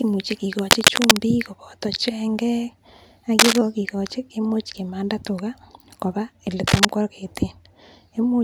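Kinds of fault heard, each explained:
Cable scratch noise: dense, uneven bursts of scratching over the speech, somewhat louder than it, at 0.59–1.22 s, 3.39–3.58 s before "kogikochi kemuche kimanda tuga" and 6.67–6.85 s after "kimanda tuga koba ele"; likely a worn cable or connector moved, its contact resistance jumping rapidly.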